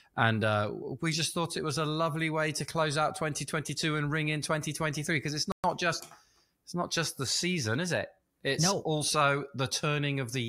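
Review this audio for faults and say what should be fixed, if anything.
The speech cuts to silence for 120 ms at 5.52 to 5.64 s, after "because it's" and before "just it's not just": a playback stall, likely from a starved buffer or blocked player thread. To prevent it, give the player a larger buffer and keep its audio thread unblocked.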